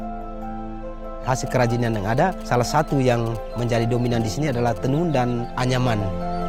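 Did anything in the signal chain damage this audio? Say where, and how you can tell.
Yes. From 1.47 to 4.78 s, GSM signalling bursts enter at the analogue wiring, where a nearby phone's RF is rectified into a galloping dit-dit-dit of short buzzes at 216.7 Hz, roughly 20 dB below the signal. A spectrogram shows grouped vertical stripes with 217 Hz harmonics.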